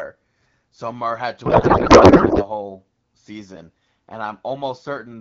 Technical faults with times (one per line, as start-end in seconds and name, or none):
1.45-2.46 codec payload misread